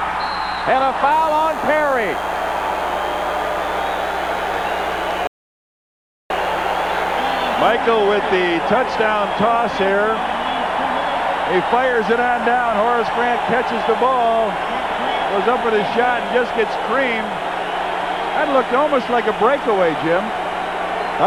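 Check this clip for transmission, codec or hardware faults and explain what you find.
There is one fault, an audio dropout to silence. From 5.27 s to 6.30 s the sound cuts out completely for about 1.03 s. The gap holds no room tone. The likely cause is lost input, so the recorder kept writing silence. Whatever sounded during that second is gone.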